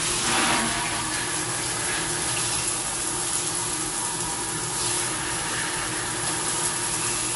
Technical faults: MP3 compression

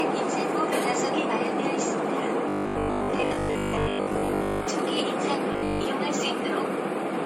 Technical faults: generation loss; robotic sound from repeated short buffers

